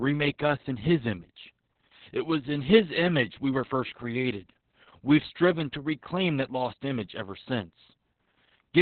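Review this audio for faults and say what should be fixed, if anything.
The speech sounds muffled, hoarse and faintly robotic from start to finish, with nothing audible above about 4.4 kHz. This is heavy Opus voice compression. The codec has dropped to a narrowband linear-prediction mode, cutting off the upper band, and it is coding the excitation so coarsely that the voice comes out hoarse and slightly robotic. The damage points to a bitrate around 6 kbps. To prevent it, encode at a higher bitrate, around 16 kbps or more, so the codec keeps wideband audio.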